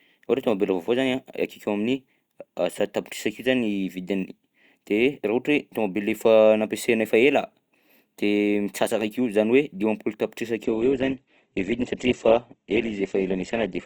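Adaptive stream at a lower bitrate from 10.64 s to the end: the connection slowed, the treble abruptly vanishes above 8.2 kHz with no gap, and codec artefacts rise.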